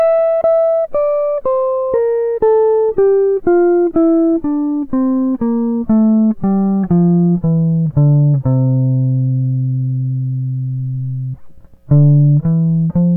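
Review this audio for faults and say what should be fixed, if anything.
Nothing here needs fixing.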